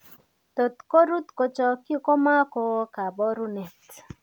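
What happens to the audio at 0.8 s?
Nothing goes wrong at 0.8 s; the speech carries on intact through that moment with no dropout, click or distortion.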